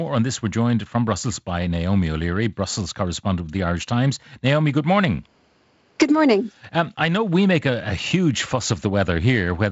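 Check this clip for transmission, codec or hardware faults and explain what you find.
Nothing stood out on listening to this speech, which comes through the wideband telephone path with its top end ending at about 7.7 kHz.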